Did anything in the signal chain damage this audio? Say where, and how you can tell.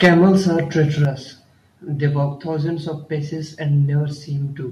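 Yes. From 0.03 to 0.3 s the loudest syllables turn harsh and crackly, with a gritty edge on each peak. This is microphone overload, likely at the converter stage: the input was driven about 7 dB past full scale, so the converter flattened the waveform tops. Only a few percent of samples are cut, but squaring off those peaks adds the high-frequency crackle heard on the syllables.

The overall level, including the background, drops abruptly twice: by about 3 dB at 0.06 s, right inside that distorted opening, and by a further 6 dB or so at 1.05 s. Each drop is instantaneous, without a fade. This is the microphone volume stepped down, likely by call processing that detected the clipping and lowered the device's input gain in discrete steps.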